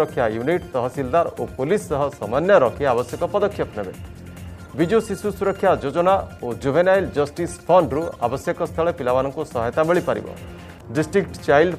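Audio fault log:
No faults heard anywhere in this recording.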